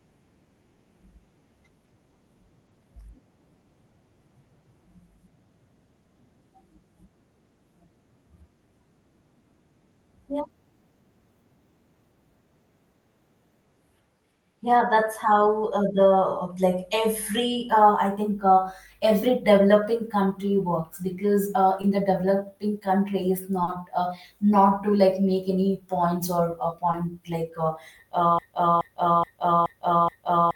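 Three short concealed packet losses occur in the speech. At 21.81 to 21.85 s, after "country works because uh" and before "the developing country is", about 20 ms of audio never arrived in time. At 23.63 to 23.69 s, just before "uh not to like", about 40 ms is missing. At 26.91 to 26.95 s, between "any points or uh" and "like uh", another 20 ms or so is lost. In each case the decoder extended the preceding sound to cover the gap and then crossfaded back into the real signal, leaving a brief smear or wobble.

From 28.39 s to the end, a broken-record loop takes over. A 0.42 s fragment repeats back to back five times with no variation, and the speech that should have followed is gone. The exact, seamless repetition points to a stall in which the player or stream kept re-sending its last held buffer, likely a stalled stream or encoder. This all sits on a call-codec path whose high end stops near 12 kHz.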